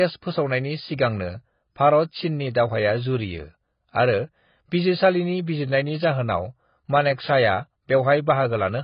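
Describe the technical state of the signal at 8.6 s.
At 8.6 s, as throughout, the speech sounds heavily AAC-compressed, likely at a low bitrate near 16 kbps. Nothing survives above 5.1 kHz, and the coarse spectral quantisation leaves sibilants fizzy and warbling rather than simply muffled as with plain low-pass filtering.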